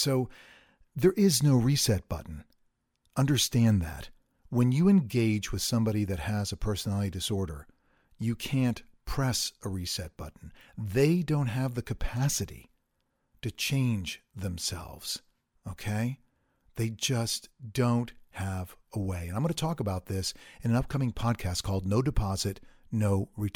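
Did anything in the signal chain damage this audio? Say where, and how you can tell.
No, nothing along the chain seems to have hurt this speech recording, and there's no stage where I can hear anything going wrong.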